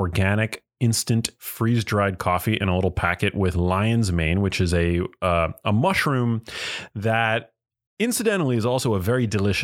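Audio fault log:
No fault is heard in this speech clip.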